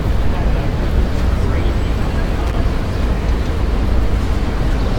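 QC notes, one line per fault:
2.47–2.54 s, loose connector crackle: a brief, irregular burst of scratchy crackle about 70 ms long, where a worn or dirty contact in the signal path intermittently broke and remade connection, chopping the audio on and off.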